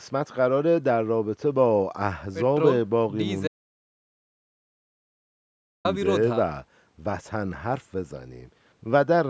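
The input feed to this speech recording was likely lost partway through, through a dropped link, a disconnected device or a stray mute, while the recorder kept writing silence. The result is an audio dropout to silence from 3.48 s to 5.85 s: the speech cuts off abruptly, about 2.37 s of dead silence follows with no room tone at all, and it resumes mid-flow. Whatever was said in that gap is gone. The band stops at 8 kHz, as expected from call microphone processing.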